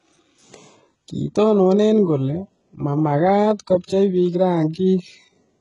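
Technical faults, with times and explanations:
Throughout, HE-AAC compression: the treble above the core band sounds synthetic, with gritty, lispy s sounds and nothing above 11.1 kHz, likely from spectral band replication at a very low bitrate near 12 kbps. Unlike a plain low-pass, the top stays bright but mismatched rather than dull.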